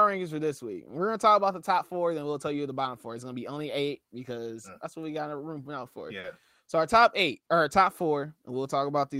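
Clock drift between sender and receiver runs through the whole clip. The sending clock runs roughly 3 percent slow, so the receiver's jitter buffer keeps draining, and the timing has small, unevenly spaced hiccups where the flow cannot keep pace.

Repeated timing corrections run from 0.02 s to 9.0 s. To stay in step with the slow sender, the receiver keeps repeating short pieces, all in the same direction. The playback runs at 98 percent speed and stretches by about a fifth of a second overall. The result is a slightly slack, unsteady tempo rather than obvious glitches.

A short stall from a late packet comes at 6.20 s to 6.26 s. A packet missed its deadline, and the buffer ran empty. The receiver held the last sound for 40 ms until the data arrived, then resumed at the same point. Nothing is lost, but that moment drags, with a faint buzz or dip.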